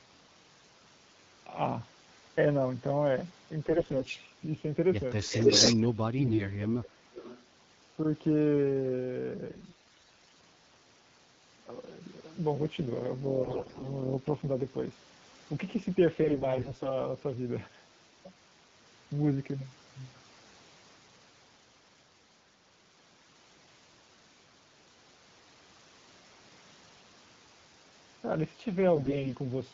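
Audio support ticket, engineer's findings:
AMR bit errors at 3.69–4.19 s, 6.18–6.45 s, 9.48–10.38 s, 13.44–13.88 s, 16.15–16.98 s and 28.96–29.35 s. Hoarse, gargly, scratchy rasp while pitch and level hold. Spectrogram shows smeared, broken harmonics filled with grainy noise. Weak-link errors in AMR-WB's less protected bits.

Echo leak at 5.23–5.81 s and 7.12–7.46 s. Delayed copy trailing by about 0.28 s. First burst is roughly 10 dB above the speech, second about 20 dB below. Shows as a repeated, time-shifted waveform pattern. Likely a loudspeaker-side echo canceller leaving residue.

Speech suppressed in double talk, 5.71–6.92 s, about one second affected in total. Talker dips and drops out in chunks, deepest about 30 dB. Waveform envelope shows gouges. Likely the echo canceller attenuating during overlapping talk.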